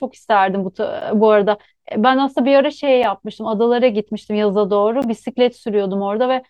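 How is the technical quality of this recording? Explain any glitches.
The speech is interrupted by three brief silent holes, at 1.01 s, 3.03 s and 5.02 s, lasting about 11 ms, 6 ms and 14 ms. These are gaps between stream segments. The audio arrives in 2-second pieces, and where the timestamps of one piece don't quite meet the next, the player fills the difference with silence. Each hole has hard edges. Unlike a dropout from packet loss, nothing is missing: the speech resumes exactly where it stopped.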